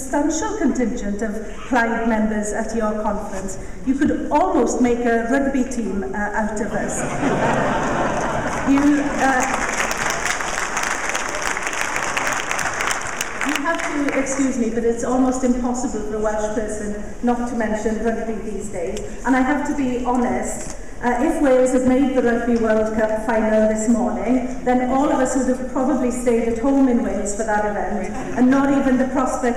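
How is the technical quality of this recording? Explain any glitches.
The recording has one fault, present from start to finish: hard clipping.

Hard clipping runs throughout the clip. The signal was driven about 15 dB beyond what some stage in the chain could pass, so its peaks were cut off flat. Only around one or two percent of samples went over, so the damage sits on the loudest moments. The flattened tops add harmonics high in the spectrum, heard as distortion on those peaks.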